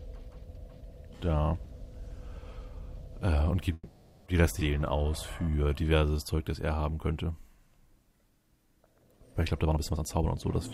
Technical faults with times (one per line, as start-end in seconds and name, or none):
3.73-4.28 call audio freeze
4.60-4.63 skip ahead
4.78-6.37 jitter buffer slow-down
9.53-10.34 jitter buffer speed-up